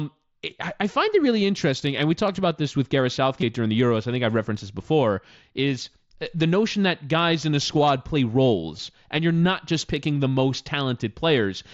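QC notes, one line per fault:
1.97 s, 3.41 s and 8.77 s: concealed Bluetooth headset packet loss. Short gaps of about 7.5 ms at 1.97 s and 15 ms at the other two, which fits one and two lost frames. The receiver fills each gap by repeating a matching stretch of the preceding waveform, so the single loss is nearly hidden, while the two-frame runs give a buzzy held tone with a small warble where real audio returns on the otherwise wideband mSBC headset audio.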